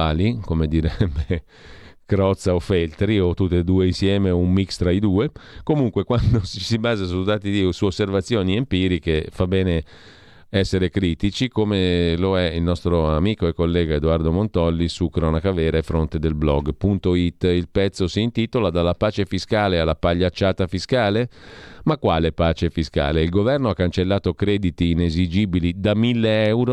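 No technical faults are present anywhere in the speech recording, and the signal holds steady throughout.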